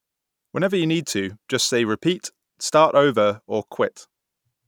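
Nothing stood out on listening to this recording.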